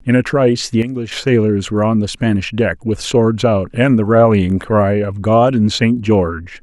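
A sudden gain jump runs from 0.82 to 1.12 s. The speech drops by about 9 dB in a single step, and the background noise falls with it, so the whole signal sounds abruptly quieter rather than fading. At 1.12 s both snap back to their earlier level. The likely cause is a digital gain setting or bit shift applied instantly, from one sample to the next, with no ramp to smooth the change.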